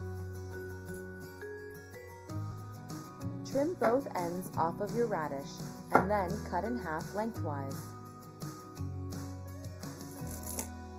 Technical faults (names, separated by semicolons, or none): channel delay (comb filtering); skip ahead; jitter buffer speed-up